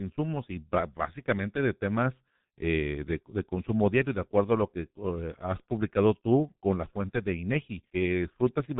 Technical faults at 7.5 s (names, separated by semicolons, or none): G.723.1 codec